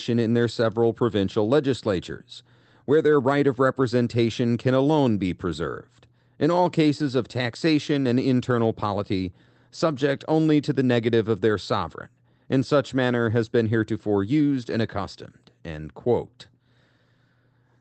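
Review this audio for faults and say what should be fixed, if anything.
Nothing here needs fixing, as no faults can be heard. The speech has the character of a WebRTC call path, with the top end stopping at 8 kHz and a coding texture that fits Opus at a modest bitrate.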